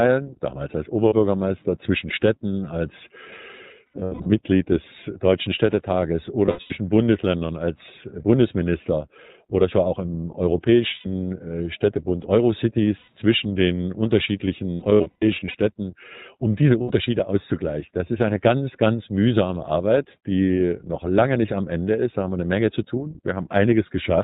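The whole clip passes through the iLBC codec. Nothing above 4 kHz survives, and the speech sounds plainly rough and synthetic, which fits 15.2 kbps narrowband coding. Lost iLBC frames occur at 1.08–1.14, 3.91–4.30, 6.46–6.75, 10.94–11.07, 12.98–13.08, 14.74–15.55 and 16.82–16.91 s. The three longer spans hold scattered dropouts rather than one continuous gap. The decoder bridges each loss with a held, buzzy repeated pitch cycle, then snaps back almost immediately.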